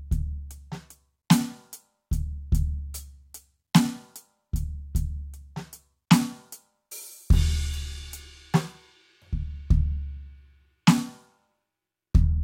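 Listening to the music, nothing stood out as a technical problem at any point.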